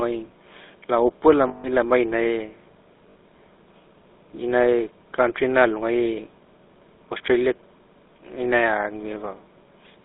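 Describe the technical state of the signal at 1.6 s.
At 1.6 s the signal is inside a run of lost GSM frames, spanning 1.48 to 1.66 s, just after "gai laopua". The decoder received about 160 ms of unusable frames and filled the gap by reusing the parameters of the last good frame. Instead of a clean gap, the sound freezes into a rough, metallic, ringing tone rather than continuing the speech.

Underneath that, the whole clip passes through the GSM full-rate codec, which fits the 13 kbps full-rate coder. It rebuilds speech from a vocal-tract model driven by regularly spaced pulses, and here the line is limited to roughly 250 Hz to 3.7 kHz. The coding damage is plainly audible: the speech has a buzzy, gravelly roughness, with no low bass and nothing in the upper range.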